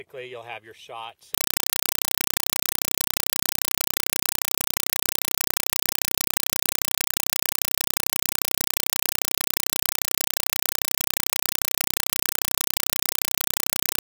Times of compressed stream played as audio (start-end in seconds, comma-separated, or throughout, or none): 1.34-14.02